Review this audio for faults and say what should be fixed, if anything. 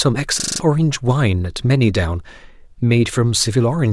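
There's a system hang loop from 0.4 to 0.6 s. The same 40 ms slice of speech repeats five times back to back at 25 per second, so you hear a rough, rattling stutter instead of the speech moving forward. Something stalled while the audio hardware kept replaying its ring buffer, which fits a buffer of about 40 ms, and roughly a fifth of a second of real audio is lost. To prevent it, keep the audio thread at high priority, away from blocking calls, and have the driver output silence rather than replay stale buffer contents when it runs dry.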